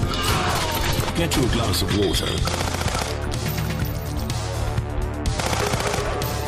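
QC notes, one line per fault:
Throughout: hard clipping. Peaks drive about 3 dB past the ceiling and are sliced flat, affecting only a small fraction of samples, roughly half a percent. This gives brief crackle on the loudest moments. The waveform shows squared-off tops, and the spectrogram shows faint vertical streaks of high harmonics at each peak.
1.09–1.11 s: skip ahead. Playback jumps forward past roughly a second of audio with no gap inserted, so the two sides butt directly together and the sound lurches abruptly. The waveform shows an abrupt discontinuity, and the spectrogram shows a sudden content change with a thin broadband splice line.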